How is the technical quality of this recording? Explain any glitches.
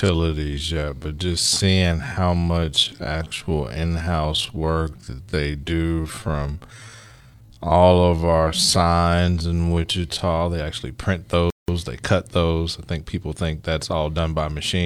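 The technical quality is compromised by two clear glitches, one long and one brief.

From 0.0 to 10.4 s there is a time-stretched section. The speech runs at about 0.6 times normal speed while its pitch stays put, which likely comes from software lengthening the audio by repeating short slices. The result sounds dragging, with drawn-out syllables. On a spectrogram, harmonics keep their spacing but stretch horizontally, with subtle repeated patterning. The waveform shows elongated syllable envelopes.

At 11.50 s a playback stall cuts the speech dead for about 180 ms before it resumes at 11.68 s. The player likely ran short of data or was briefly blocked, so output fell to silence mid-flow. It sounds like an abrupt hiccup. The waveform shows a flat, near-silent gap with hard edges, and the spectrogram shows a clean vertical blank band across all frequencies.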